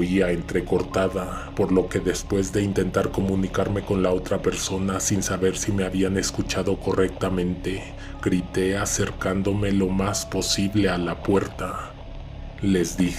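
Listening through, nothing stood out as a technical fault at any point.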